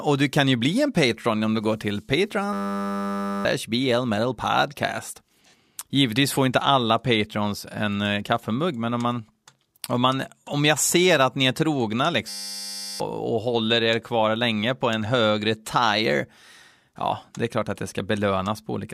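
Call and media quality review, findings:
System hang loop at 2.53–3.45 s, after "om du går till", and 12.29–13.0 s, after "att ni är trogna", before "och håller er kvar". A steady 100 Hz buzz from an identical 10 ms slice repeating, which fits a stalled driver's 10 ms ring buffer. About a second, then about 0.7 s, of audio lost. Exact periodic repetition separates it from jitter-buffer concealment.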